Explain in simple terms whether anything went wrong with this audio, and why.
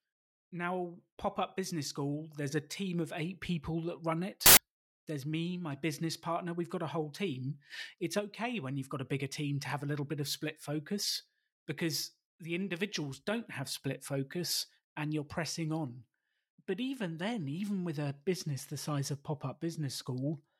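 Samples built from the wrong bytes, from 4.46 to 4.57 s, right after "eight people that run" and just before "there's me my business". For about a tenth of a second, the speech is replaced by a burst of loud hiss. Each sample is stored as several bytes, and here the player joined them up wrongly, so the tiny, rapidly changing bits of each value were treated as the big ones. The result is harsh, loud noise.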